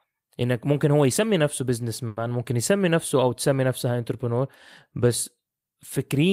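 Speech, with one short stall from a late packet at 2.07 to 2.18 s. The jitter buffer ran dry, so the receiver held the last sound for about 90 ms until the packet showed up, giving a brief smeared hang. Nothing is lost, but everything after runs 90 ms later.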